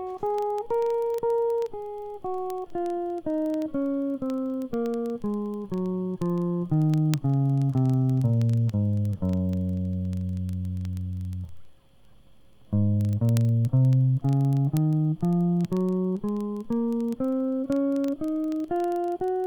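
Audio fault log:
0.1–19.44 s, word clock ticks: sharp ticks of uneven strength recur about every 0.04 s, several hundred in all. The receiving clock is not locked to the sender and drifts by something like 500 ppm, so one sample is dropped or repeated at each slip. A spectrogram shows evenly spaced thin vertical broadband lines, and the waveform shows tiny one-sample steps.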